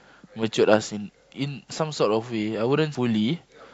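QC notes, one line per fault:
2.95 s, damaged data in a compressed stream: a short glitch cuts into the speech at this point. A stretch of the compressed stream reached the decoder corrupted, so it could not read those frames properly, lost its lock on the frame structure and hunted for the next valid header. The garbled frame comes out as the glitch.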